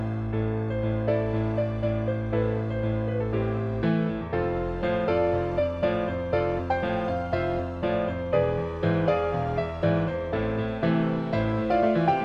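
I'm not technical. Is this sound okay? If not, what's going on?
Yes, this sound is fine from a technical point of view. Nothing in it suggests that anything went wrong along the way.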